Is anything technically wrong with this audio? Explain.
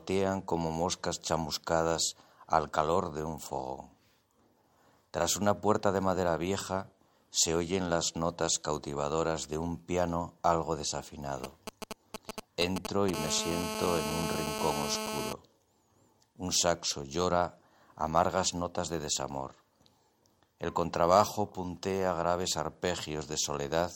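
Yes, there's GSM interference from a 2G phone close by, in two stages.

From 11.44 to 13.10 s you get GSM signalling bursts. The phone is only handshaking with the network, sending short clusters of radio pulses at about 217 Hz, and something in the audio chain rectifies them into sound. It comes out as that galloping dit-dit-dit of brief buzzes, sitting only a little below the wanted audio.

Then from 13.14 to 15.33 s it turns into full GSM phone buzz, because the phone has gone into a call and transmits continuously at 216.7 Hz bursts. The rectified pulse train gives a hard, raspy, harmonic-rich buzz at that rate, about 4 dB below the signal, and it has nothing to do with the program.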